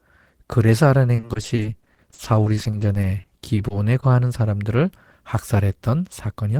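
From 1.15 to 4.04 s, repeated packet loss (robotic sound) sets in: 29 gaps up to 40 ms, about 22% concealed, leaving choppy speech with pieces missing and notched, smeared spectrogram columns. From 6.26 to 6.57 s, jitter buffer speed-up trims pitch periods, running speech at 112% with about 50 ms removed, so it sounds hurried at the same pitch.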